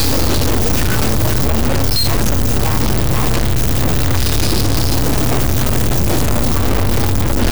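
A stuck bit is the likely cause: one of the higher data bits appears pinned at a fixed value for the whole clip, so roughly half the samples are pushed off by a large step, around -10 dBFS. That error follows the waveform's own pattern, giving a harsh, buzzy distortion over every sound. Because the bit also flips with the sign of quiet values, the gaps between sounds fill with loud, gritty noise rather than falling silent.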